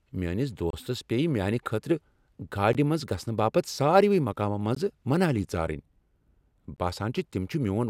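At 0.70 to 0.73 s, then 2.73, 4.75 and 6.76 s, speech drops out in gaps at joins of encoded pieces. Untrimmed encoder silence leaves 28 ms, then 16 ms, holes every 2 s.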